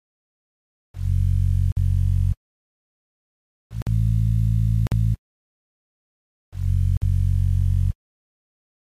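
At 1.72, 3.82, 4.87 and 6.97 s, gaps between chunks leave 50 ms holes on a 1.05 s grid. Unlike dropouts, no sound is lost; it simply pauses at each join.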